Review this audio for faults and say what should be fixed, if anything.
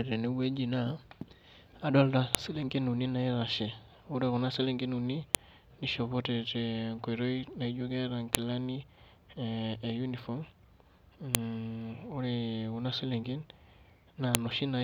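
Sharp, loud clicks cut through the speech at 2.35, 5.35 (just after "selenken uni"), 8.35, 11.35 and 14.35 s, each a single snap regardless of what the signal is doing. This is a file header played as audio: the stream was assembled from 3-second WAV pieces, and each piece's header bytes were left in and decoded as samples. To prevent it, strip the headers and concatenate only the raw sample data when joining or streaming the pieces.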